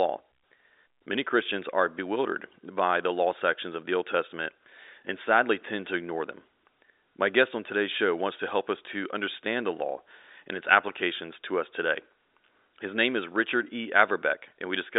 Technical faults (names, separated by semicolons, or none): none